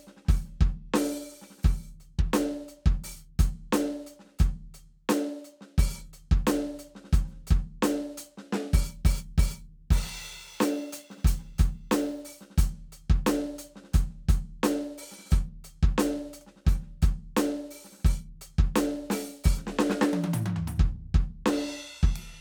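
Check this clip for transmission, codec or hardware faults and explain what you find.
One hardware fault is present in this music clip. From 8.89 s to 12.21 s there is sample clock jitter: the converter's clock wanders by several microseconds, so samples land at slightly wrong instants. Steep, bright passages suffer most, producing a hiss-like roughness roughly 25 dB below the music that follows its loudness.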